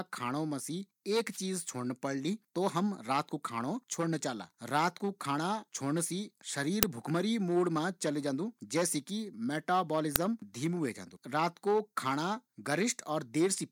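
At 1.30 s a wireless microphone noise hit lasts about 90 ms, until 1.39 s. The analogue FM radio link fades briefly as reflected signals cancel, and the receiver's noise floor rises into a short swish of static over the speech.

At 6.83 s and 10.16 s an uninitialised buffer is played out. Stale memory is read as samples before any audio was written, giving a brief, loud burst of digital noise or crack. The first lasts about 11 ms, which fits a 512-sample buffer. The second lasts under 3 ms, which fits a 128-sample buffer.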